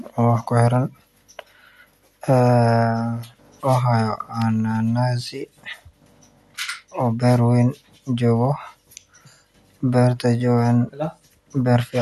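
An electrical switching spike hits at 4.42 s, a sharp snap lasting only a few milliseconds and sitting on top of the speech. It was likely caused by a nearby switch, motor or static discharge arcing, with the audio line picking up that brief burst.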